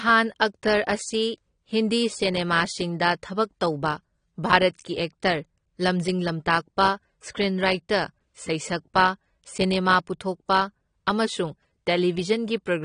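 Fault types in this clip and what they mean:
AAC compression: the speech sounds dull and smeared, with a fizzy, warbling edge on sibilants, likely from low-bitrate AAC-LC coding at roughly 32 kbps. On a spectrogram, energy stops abruptly at about 9.8 kHz.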